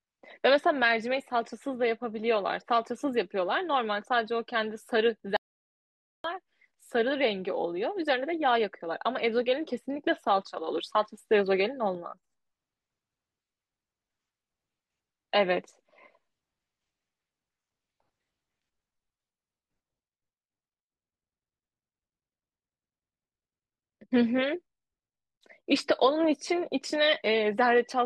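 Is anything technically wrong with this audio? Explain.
Yes. From 5.37 to 6.24 s the speech stops dead in an audio dropout to silence lasting about 0.88 s, most likely a lost input while recording continued. Room tone vanishes too, and the waveform shows a flat, near-silent line with a blank spectrogram column.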